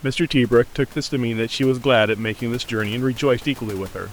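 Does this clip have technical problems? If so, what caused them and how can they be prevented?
No technical faults are present.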